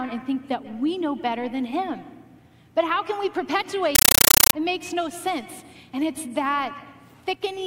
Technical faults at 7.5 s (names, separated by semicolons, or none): none